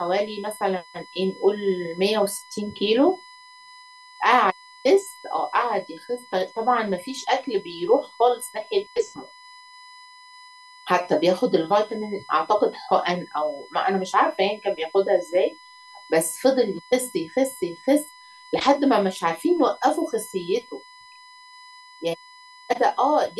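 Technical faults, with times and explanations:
Throughout, USB whine: current drawn by the USB bus in regular 1 ms frames is getting into the audio path through shared power or ground, so its repetition rate turns into a steady tone. That puts a fixed-pitch whine at 1 kHz, strongest at that fundamental, sitting roughly 25 dB under the speech for the whole clip. Because it never moves in pitch, it stands apart from the speech as a thin, constant high tone running beneath it.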